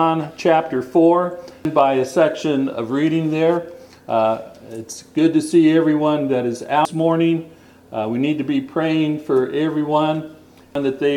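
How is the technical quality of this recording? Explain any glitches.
Three brief glitches break up the recording, at 1.65, 6.85 and 10.75 s. Each is a short chirp, squawk, click or hole caused by damaged data in a compressed stream: corrupted bytes make the decoder misread the frames there and lose sync until it finds the next valid frame header.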